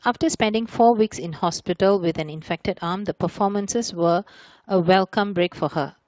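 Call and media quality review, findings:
Nothing to log on this one: no faults turned up anywhere in the speech, and the Speex path sounds like it's doing its normal job.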